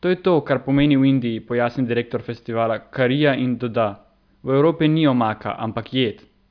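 A short recording of speech, with no technical fault to be heard anywhere in it. Nothing in the signal points to a problem at any point along its chain.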